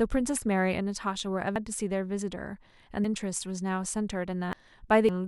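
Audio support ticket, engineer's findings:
Compressed frames skipped, four spots: 1.56 s, 3.04 s, 4.53 s, 5.09 s. Speech jumps ahead by about half a second, then about 0.7 s, 0.7 s and 0.4 s. Jump sizes fit whole frames of about 93 ms. Decoder input side: frames missing from the file or rejected as damaged.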